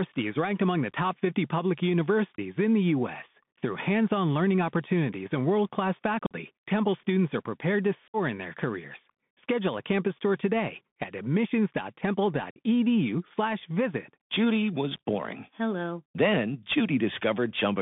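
The whole clip carries the sound of a Bluetooth CVSD headset codec. The speech sits in a narrow band, about 150 Hz to 3.6 kHz, with nothing above. The coder sends one bit per sample, only up or down, with an adapting step, which fits a 64 kbps link. The damage is plainly audible. Fast, loud high sounds outrun the step and distort. S sounds turn scratchy. A granular hiss runs under the speech.

There is unconcealed Bluetooth headset packet loss at four points. The first is at 2.36 to 2.39 s, a 22.5 ms gap. The second is at 6.26 to 6.34 s, lasting 45 ms. The third, at 8.08 to 8.16 s, is the longest at 60 ms. The last is at 12.51 to 12.59 s, lasting 52.5 ms. In each case a short run of voice packets never reached the other end. Nothing filled the gap smoothly. The speech drops out abruptly and resumes just as sharply.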